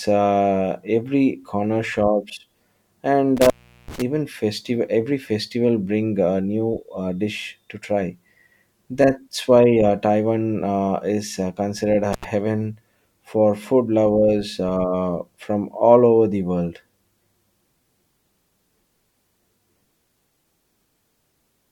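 An intermittent contact cuts the speech from 3.37 to 4.02 s, just before "festival every festival bring". The line opens for 385 ms, with crackle at the edges. It drops again from 12.13 to 12.24 s, after "uh is uh considered", for 77 ms. A loose plug or cable is breaking the signal path.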